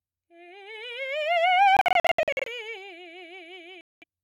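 Audio packets likely reached the headphones too late and were discarded, a Bluetooth dropout, leaving silent holes in the music. From 1.77 to 2.48 s about 0.4 s goes missing in scattered gaps, the longest near 70 ms. From 3.81 to 4.04 s a further 0.2 s vanishes. Each time the music resumes further along, as though it had kept playing.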